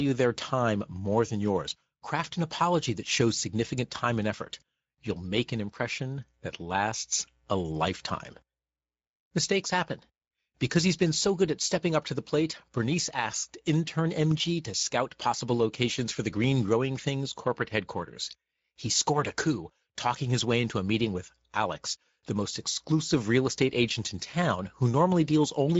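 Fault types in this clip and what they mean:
Speex codec: low-bitrate CELP coding leaves the speech plainly degraded throughout; a spectrogram shows nothing above 7.7 kHz, which fits a wideband setting near 17 kbps.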